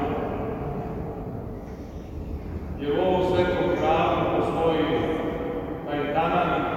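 No technical faults can be heard anywhere in this audio. Nothing in the sound points to a problem at any moment.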